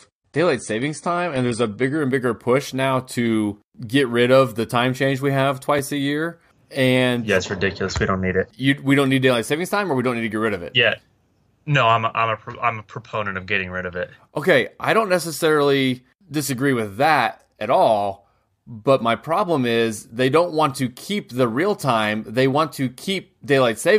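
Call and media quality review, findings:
Dull, smeared speech, nothing above 9.9 kHz, 0.0–2.0 s, then gapless lift: adaptive stream starting at a low bitrate, fits 32 kbit/s stepping to 96 kbit/s.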